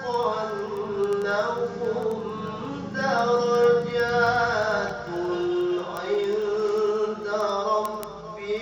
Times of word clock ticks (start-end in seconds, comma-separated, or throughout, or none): 0.14-8.57